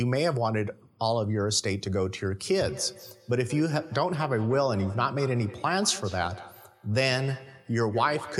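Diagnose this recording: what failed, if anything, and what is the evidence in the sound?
This is feedback echo between two devices, a call-processing failure. From 2.68 s to the end, the speech comes back at a steady interval of around 200 ms, peaking about 15 dB below the direct voice. Two devices in the same room are on the call. One plays the other's audio, and that microphone picks it up again. Each echo canceller only subtracts its own device's output, so this loop never gets removed.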